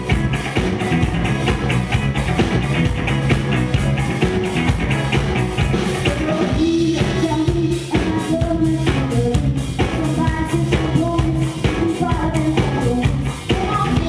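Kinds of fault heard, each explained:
Aliasing: the audio was resampled down without an anti-aliasing filter first, which fits a drop from 48 kHz to 22 kHz, so content above 11 kHz folds back as unrelated tones roughly 25 dB below the signal, giving a gritty, metallic top end crowded against 11 kHz.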